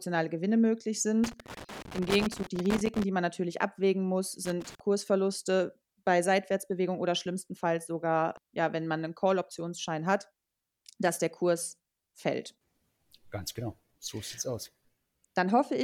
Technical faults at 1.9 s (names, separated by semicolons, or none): loose connector crackle